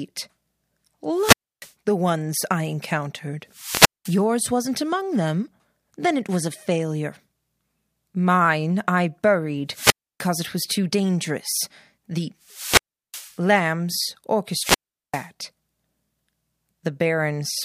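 Wireless microphone squelch dropouts occur at 1.13–1.72 s (before "the ones I encountered"), 3.50–4.25 s (before "wasn't among them"), 9.68–10.31 s (before "it was too dangerous"), 12.43–13.39 s and 14.49–15.29 s. Each time the radio signal fades, hiss rises, and the receiver's squelch mutes the speech for roughly 0.2–0.4 s before it returns.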